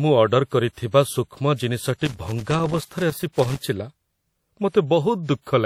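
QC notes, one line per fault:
throughout: WMA compression, likely the cause of the plainly audible codec damage across the speech. A transform coder working in long blocks smears its quantisation noise over tens of milliseconds, so the sound rings and turns washy, with a hiss that swells and fades with the signal. The band stops at 17.2 kHz, and the level of damage points to a low bitrate of around 48 kbps. Unlike broadband noise or a clock fault, the artefacts track the signal and never sit as a steady floor.
2.05 to 3.59 s: loose connector crackle. For about 1.5 s, a worn or dirty contact keeps making and breaking, chopping the signal into an irregular burst of crackle and scratching. Unlike codec artefacts, which follow the speech for the whole clip, this is confined to one stretch and has no regular rhythm. Its uneven, scratchy spacing also sets it apart from steady dropouts, which would repeat in a more orderly way.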